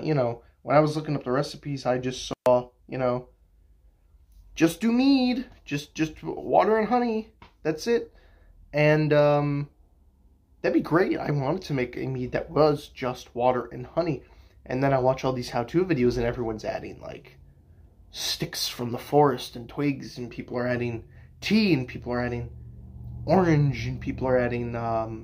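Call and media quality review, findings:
Dropout with crackle at both edges, 2.31 to 2.46 s; signal gone for about 127 ms, faint hiss in the gap. Intermittent contact: loose cable or plug momentarily opening the signal path, edge crackle from the contact breaking and re-making. Check connectors and cable strain relief on the capture chain.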